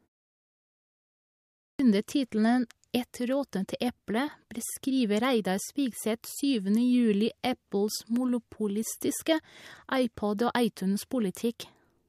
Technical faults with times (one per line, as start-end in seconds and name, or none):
1.71-1.79 clipped start after a pause